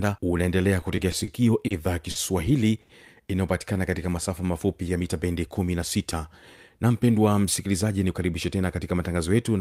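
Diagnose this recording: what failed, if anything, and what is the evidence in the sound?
Packets on the network path arrived late and in an uneven trickle between 0.81 and 1.29 s, so the receiver's jitter buffer ran dry four times. This is repeated stalls (stutter). Each time the decoder extended the last bit of speech until data turned up, filling 60 ms in total, the longest hold 30 ms. Nothing was lost, but about 12% of that stretch is synthesized continuation, and the speech catches and drags.

Three separate late packets then caused a short stall from a late packet each: at 1.67 s (30 ms), 2.10 s (50 ms) and 2.81 s (80 ms). The buffer emptied, the receiver held the current sound until the packet arrived, and playback resumed exactly where it left off, so the end-to-end delay grew by the same 30, 50 and 80 ms. You hear a syllable hang on too long, with a faint buzzy sustain, the 2.81 s one most plainly.

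With its reserve depleted, the jitter buffer then deliberately played slower to rebuild it. This is a jitter buffer slow-down, from 3.74 to 4.90 s. The receiver repeated individual pitch periods and slivers of pauses, inserting 99 ms in all, so the speech runs at about 92% speed with the pitch unchanged. Vowels are drawn out and the pacing feels sluggish.

Later the buffer had overfilled, as happens when delayed packets arrive in a burst, and the receiver trimmed it back. This is a jitter buffer speed-up, from 6.83 to 8.63 s. Short pieces a pitch period or so long were cut out repeatedly, taking away roughly a fifth of a second. The speech runs at about 109% speed at the same pitch and sounds hurried and slightly clipped in its rhythm.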